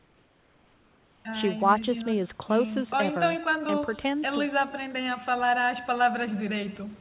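A speech recording carrying two faults throughout and one at the start. Overdone noise removal leaves the gaps between phrases sunk to near silence and sprinkled with twinkling specks; on a spectrogram the background shows as scattered isolated dots, and the weaker harmonics of the voice are bitten away. Echo with no canceller trails every phrase by roughly 150 ms, a thinner copy about 21 dB down. A spectrogram shows a faint duplicate of each syllable shifted right, and the waveform shows small ghost bursts after each loud onset. From 0 to 1.25 s the background is a steady, featureless hiss about 3 dB quieter than the real room tone that follows. This is likely comfort noise in place of the background, generated while transmission was paused. On a spectrogram that stretch looks like a smooth, uniform band with none of the later texture. Nothing appears above 4 kHz, as expected from the narrowband telephone codec in the call path.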